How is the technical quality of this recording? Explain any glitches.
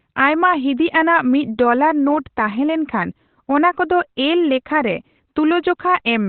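The quality is poor throughout: the speech is narrow, muffled and hoarse from start to finish, with nothing audible above about 4.2 kHz.

That's most likely Opus compression running in its SILK speech mode at narrowband. The encoder models the voice rather than keeping the full spectrum, and at this level of damage, which fits a bitrate around 12 kbps, it cuts the top end entirely. So everything sounds dull and boxy, sibilants lose their edge, and the voice has a rough, hoarse texture.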